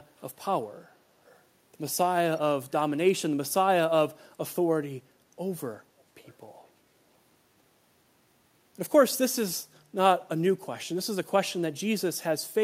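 Echo leak at 0.18–0.22, 1.24–1.43, 5.99–6.03 and 6.19–6.35 s: faint, brief scraps of speech return about 419 ms late, far below the direct level. Likely a far-end loudspeaker whose echo canceller let some residue through.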